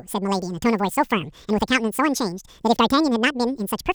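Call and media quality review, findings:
Speech plays at double speed and an octave high throughout the clip, pitch raised 12 semitones. Audio read two samples at a time (double speed): decoder or format negotiation mismatch, reader taking sample pairs as one frame, assuming stereo or double-width samples.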